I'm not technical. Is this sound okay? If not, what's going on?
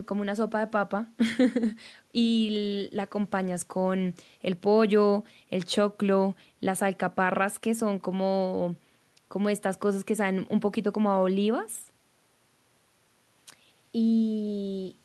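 Yes, nothing in this recording points to a technical fault.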